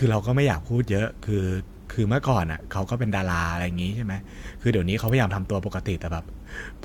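An electrical switching spike at 5.08 s cuts across the speech as a sharp snap, likely a nearby switch or static discharge arcing into the audio line.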